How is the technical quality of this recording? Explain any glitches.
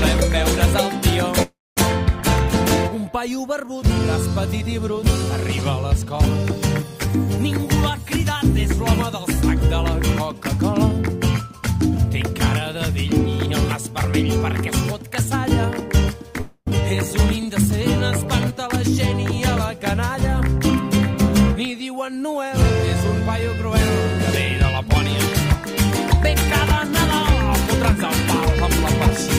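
The recording has three audible glitches: two brief gaps where the sound cuts out and one stretch that rushes ahead.

From 1.42 to 1.78 s and again from 16.41 to 16.69 s, the sound smears into a fading buzz, then goes quiet for roughly 0.23 s and 0.05 s respectively, and resumes with about 0.2 s missing. This is likely a long network dropout: the receiver stretched the last audio to cover the gap, then gave up.

Between 6.05 and 7.38 s the audio plays about 7% fast without any pitch change, sounding slightly hurried. This is a jitter buffer speed-up. Too much audio had built up in the buffer, so the receiver trimmed tiny pitch-period slices, roughly a tenth of a second in total, to catch up.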